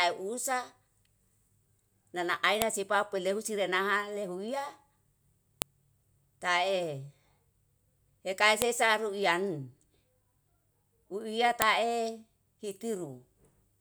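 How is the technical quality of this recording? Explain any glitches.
The recording has one recurring glitch. File header played as audio at 2.62, 5.62, 8.62 and 11.62 s: segments joined every 3 s keep their header bytes, which play as sharp, loud clicks regardless of the speech.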